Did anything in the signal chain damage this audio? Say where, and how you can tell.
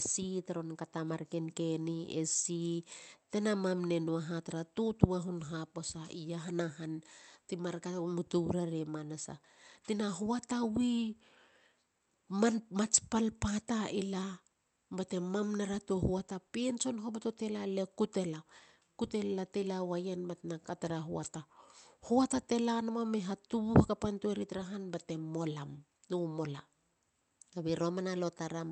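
No, nothing in the chain damaged this speech: it passed through a WebRTC call path working as intended, with the audio band extending to about 8 kHz as a call codec of this kind would give.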